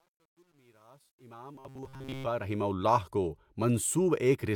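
From 0.00 to 2.74 s, a digital fade stage keeps only 10 bits and adds no dither, so the quiet part of the fade is rebuilt from coarse square steps. This truncation distortion on the fade sounds gritty, worst from 0.00 to 1.72 s, and ends just before "اللہ کو".

From 1.55 to 2.26 s, new audio is likely arriving too seldom, so the last 7.5 ms or so is replayed to fill the gaps for roughly 70 percent of that stretch. The result is robotic sound from repeated short buffers, a rigid buzz at 133 Hz imposed on the speech.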